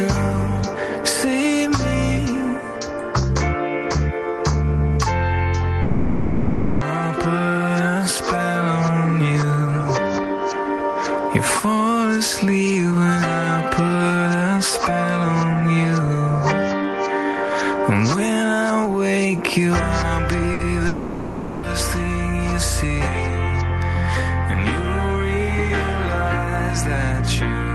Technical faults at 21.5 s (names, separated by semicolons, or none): long network dropout